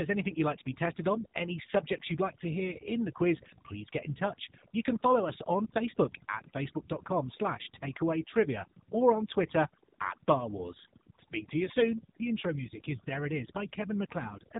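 From start to finish the background sits in an unnatural near-silence broken by twinkling specks, and the quieter parts of the speech seem to dissolve. This is overdone noise removal: a noise reduction stage set too aggressively has pushed individual frequency bands down or off wherever they came close to its noise estimate, taking low-level parts of the speech away along with the noise.

Across the whole clip the speech is also muffled and boxed in, with nothing at all above about 3.8 kHz, and it carries a buzzy, synthetic edge that is plainly audible. That is the AMR narrowband mobile codec, AMR-NB, which rebuilds speech from a vocal-tract model driven by a few pulses per subframe instead of sending the waveform. The degree of buzziness points to one of its lower modes, around 7.4 kbps.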